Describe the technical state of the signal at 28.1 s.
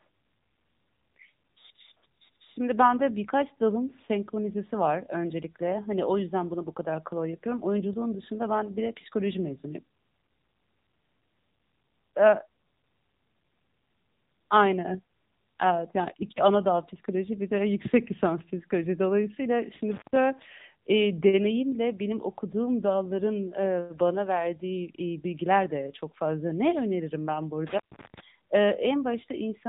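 At 28.1 s the signal is inside a dropout: between 27.67 s and 28.20 s the audio cuts away, with crackle at the start and end and only faint hiss while it is gone, the open stretch lasting about 352 ms. This is an intermittent contact, a loose plug or cable briefly losing its connection, so the line goes open and the sound vanishes until the contact closes again and the crackle marks its return.

Under that, and across the whole clip, the speech has the buzzy, synthetic, band-limited sound of the AMR narrowband mobile codec, with nothing above 3.8 kHz. AMR-NB samples at 8 kHz and rebuilds speech from a vocal-tract model driven by a few pulses every 5 ms. The plainly audible coarseness comes from its 7.95 kbps mode, where the limited bits leave the voice sounding artificial.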